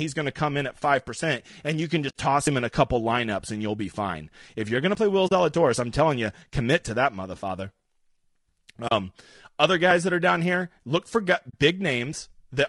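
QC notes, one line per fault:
Throughout: low-delay AAC compression. The speech has the rough, grainy texture of a low-delay AAC coder, likely AAC-ELD at around 32 kbps. Its short frames can't separate the pitch harmonics cleanly, so noise fills the gaps between them. At this bitrate the coder is short of bits, which leaves the top band thinned and synthetic. The damage is plainly audible across the whole clip.
2.09–2.15, 5.27–5.32, 8.87–8.92 and 11.49–11.55 s: AAC frame loss with muting. The decoder lost frames and zeroed their spectrum: 60 ms at 2.09 s and 40 ms at each of the others, the last just after "down here look for". The overlapping windows ramp the sound down and back up over about a frame. Each one is heard as a soft-edged dropout, not a sharp cut.
2.47, 4.95, 7.43 and 9.91 s: audio missing between chunks. A piece of roughly 20 ms goes missing at each handover between processing chunks, likely because the audio is handled in 2.5-second blocks. 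The two sides are butted together with no silence, so the speech skips forward. The skips land just before "him in a couple" and right after "you're going to", and they recur at that steady 2.5 s interval.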